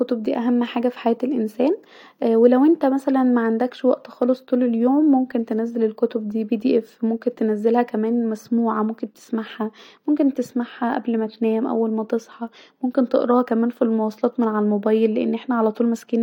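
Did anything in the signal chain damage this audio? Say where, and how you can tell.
No, nothing in the chain has audibly damaged this speech recording; the signal shows no trace of harm from wiring, conversion, buffering, processing, transmission, storage or playback at any point.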